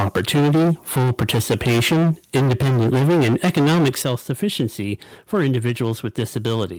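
From the start to 4.15 s the input level is likely set far too high, about 15 dB beyond what the converter can hold. Nearly a third of the waveform is flattened at its ceiling, so the speech carries a continuous harsh, crackling grit, and the louder syllables break up most. This is microphone overload. At 3.02 s the microphone volume is stepped down, likely by the call software reacting to the clipping. Voice and background drop together by about 2 dB. At 4.02 s a second, bigger step down of about 9 dB follows, and the level falls audibly in one jump. Even so, brief overload returns at 4.43–4.65 s and 5.33–5.89 s, each about 2 dB over, and at 6.19–6.64 s, about 3 dB over. The clipped share is now small, so these sound like short rasping edges on peaks rather than constant distortion. A final step down of about 6 dB, likely from the same automatic gain control, lands at 6.78 s, right at the clip's end.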